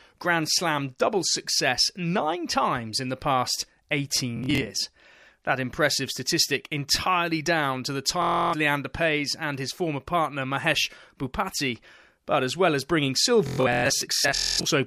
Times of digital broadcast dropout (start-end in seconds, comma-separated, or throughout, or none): none